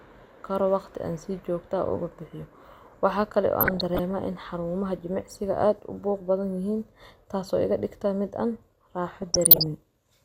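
DAB burbling at 3.60–4.13 s and after "an raxo" at 9.22–9.66 s: bit errors slip into MP2 frames, putting short blips of noise in single sub-bands, unlike clean dropouts.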